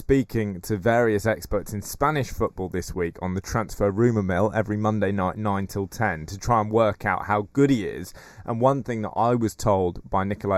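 Channel delay (comb filtering) runs throughout: one side lags slightly, cutting fixed, evenly spaced notches from around 3 kHz, hollow-sounding rather than simply muffled.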